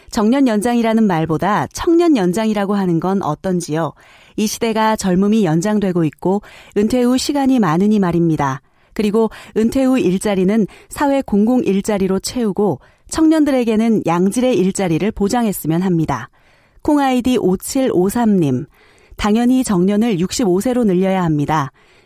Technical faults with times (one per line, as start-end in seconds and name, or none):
none